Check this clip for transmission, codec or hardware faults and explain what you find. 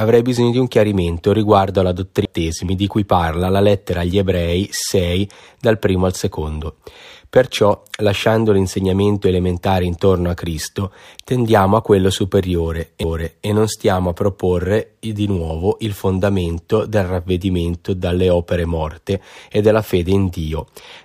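One playback fault is present. CD skip at 2.25 s, after "un chiarimento riguardo alla": the laser jumps spiral tracks, giving a very brief muted tick before the speech resumes elsewhere, at "di cui parla la".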